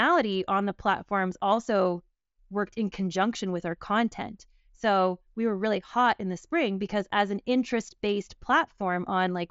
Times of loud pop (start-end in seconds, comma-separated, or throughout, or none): none